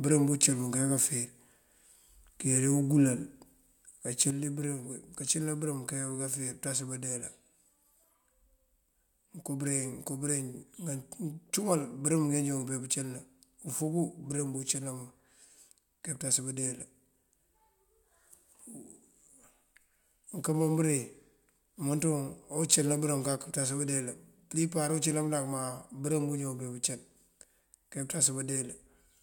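At 4.31 s the speech level drops abruptly by about 6 dB and stays down until the end. The likely cause is one channel dropping out of a stereo pair: once the two sides are summed to mono, material common to both loses half its contribution, and anything present only on the missing side vanishes. On a waveform the envelope steps down sharply at that instant; a spectrogram shows every band darkening uniformly at once.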